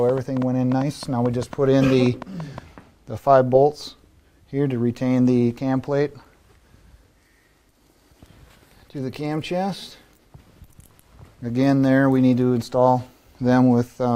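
A train of clicks runs from 0.09 to 2.59 s, around fifteen sharp, similar pulses at about 5.2 per second but unevenly spaced, peaking a few decibels above the sound itself. It is likely interference or a faltering interface, heard as irregular ticking.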